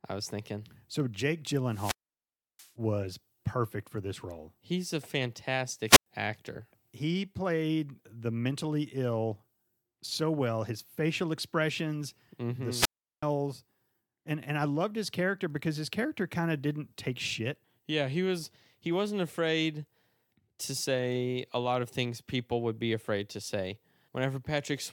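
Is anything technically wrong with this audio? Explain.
Yes. The speech suffers wireless microphone squelch dropout three times: 1.66 to 2.73 s, ending just before "was perfect for this", then 5.86 to 6.06 s and 12.73 to 13.23 s. Each time the FM radio link weakens and the receiver's squelch mutes the output, leaving near-silent holes of about 680 ms, 100 ms and 375 ms, preceded by a brief surge of hiss. That hiss before the gap sets it apart from a clean digital dropout.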